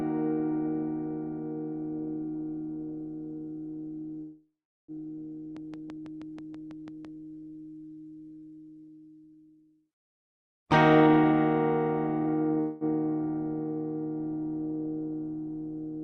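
At 4.21 s the sound stalls into a fading buzz that dies to silence for roughly 0.39 s before resuming at 4.91 s, with nothing lost. This call audio freeze is likely caused by packets held up in transit: the jitter buffer ran dry and the receiver stretched out the last sound, inserting about 0.67 s of gap.

From 5.57 s to 7.06 s a train of clicks ticks over the audio at a steady 6 per second, about ten in all, each much alike and peaking roughly 5 dB above the sound. It is likely interference or a struggling interface injecting pulses.

At 10.30 s to 11.33 s the audio hurries along at 120% speed without any pitch change. Then from 12.21 s to 12.57 s it lurches faster still, to 162%. Each jitter buffer speed-up trims roughly 0.2 s by snipping many tiny pitch-period slices so the receiver can cut excess delay.

Right after, at 12.60 s, a second call audio freeze leaves a brief fading tail with no silence, lasting 0.21 s until 12.84 s. 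It has the same likely cause of a starved jitter buffer. Throughout, the call codec's band limit cuts the top end off near 12 kHz.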